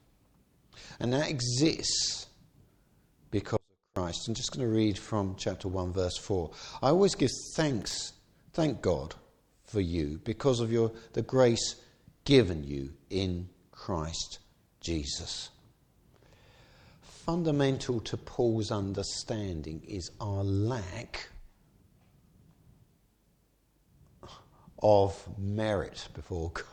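At 3.57 s the sound drops out abruptly, mid-flow, and for about 0.4 s only a faint trace of it remains, roughly 40 dB below its normal level, before it snaps back at 3.96 s. There is no fade in or out, so this is not a pause. It is an audio dropout to a faint residue, likely caused by the wanted signal being lost for a moment while the downstream path stayed live and kept passing a weak leak.

From 7.82 s to 7.94 s a short, irregular burst of crackle and scratching cuts across the sound, lasting about 0.12 s. The signal is chopped rapidly rather than cleanly interrupted, giving a rough, spitting texture instead of a gap. This is loose connector crackle: a worn or dirty contact making and breaking many times in quick succession as it shifts. Each break chops the audio, and any DC on the line adds pops.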